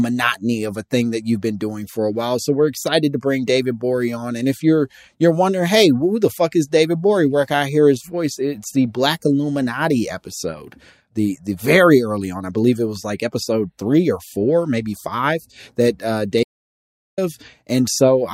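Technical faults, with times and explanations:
16.43–17.18 s: audio dropout to silence. Just after "that uh" the speech cuts off mid-flow for 0.74 s, then resumes abruptly. Unlike a natural pause, the gap holds no room tone at all, which likely means the input was lost while recording kept writing zeros.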